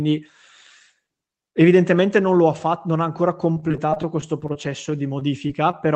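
From 3.53 s to 5.75 s the speech breaks up with repeated packet loss, producing a robotic sound. Sixteen short holes, the longest about 26 ms, are each patched by stretching the preceding sound, about 11% of that stretch in all. A single dropout leaves one gap or silence. Here the rapid string of smoothed-over patches gives a choppy, robotic sound, heard through the call path's Opus coding with its sound limited to about 8 kHz.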